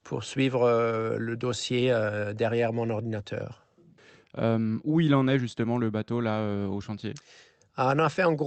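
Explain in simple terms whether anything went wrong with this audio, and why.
Nothing went wrong with this audio, beyond the ordinary character of speech that has come through an internet call.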